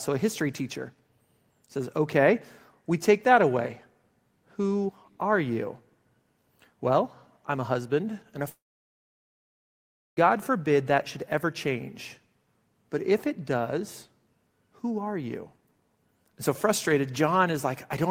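A long network dropout runs from 8.49 to 10.19 s, just after "a husband and a". The last sound is stretched into a brief fading buzz, then roughly 1.6 s of silence follows before speech resumes at "forbid that should ever". About 1.7 s of the original audio never returns. The likely cause is a gap in packet delivery: with nothing arriving, the receiver briefly concealed the loss before muting, then skipped ahead to live audio.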